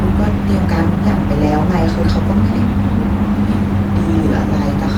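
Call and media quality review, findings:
Nothing to flag on this speech clip, with the Opus link running at 20 kbps in hybrid mode and keeping the full band up to about 20.1 kHz.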